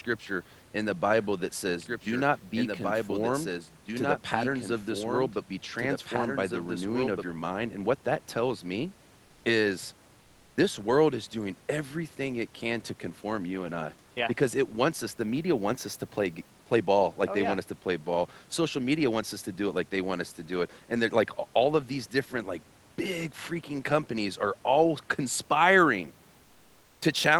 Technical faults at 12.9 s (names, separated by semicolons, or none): none